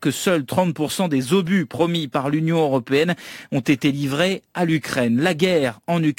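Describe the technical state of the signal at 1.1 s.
Crude rate conversion is present at 1.1 s, as it is across the whole clip. The grit points to a drop from 48 kHz to 44.1 kHz done by simply picking the nearest sample, with no filtering. That skips samples in a repeating pattern set by the two rates, adding inharmonic error tones that are shifted copies of the speech, roughly 30 dB below it. It sounds like a faint gritty fizz riding on the louder, brighter parts of the voice.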